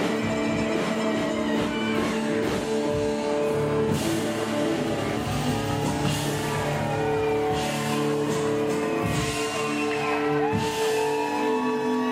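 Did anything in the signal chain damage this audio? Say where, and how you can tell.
Yes. A corrupt frame was decoded twice at the codec stage: bits in a compressed frame were flipped and the decoder played it anyway, putting energy at wrong frequencies. Brief glitches at 5.09 s and 9.92 s each suggest a single damaged frame, the first peaking around -30 dBFS, the second slightly fainter.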